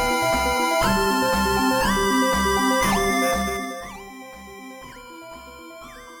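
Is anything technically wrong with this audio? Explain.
Yes. From 3.3 to 4.04 s, a ticking, zipping texture rides on the sound as it drops by roughly 20 dB. This is zipper noise: the fade moves in unsmoothed 2 dB steps, around fifteen per second, and each jump clicks.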